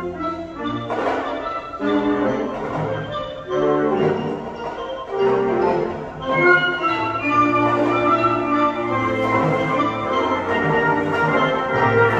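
At 9.76 to 9.81 s the sound jumps ahead by about 50 ms. These are compressed frames skipped: roughly one frame, which fits a 46.4 ms frame, was missing or rejected by the decoder.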